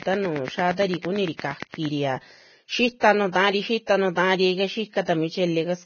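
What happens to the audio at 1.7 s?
At 1.7 s the train of clicks is still running. It covers 0.03 to 1.86 s and ends shortly afterwards. Regular, evenly spaced pulses arrive at about 8.7 per second, around fifteen of them in all, each standing about 15 dB above the speech. They are heard as a steady ticking laid over the talker and through the pauses. The likely source is interference or a faulty connection or power supply injecting a repeated impulse.

Vorbis compression also affects this moment, as it does the whole clip. The codec damage is heavy, and nothing remains above 6.6 kHz. That fits a very low bitrate of around 18 kbps. The coder likely coded a smooth spectral floor with a quantised residue on top and quantised the treble so coarsely that its detail turned into noise. The result is a hissy, grainy sound with roughened tones and smeared consonant onsets.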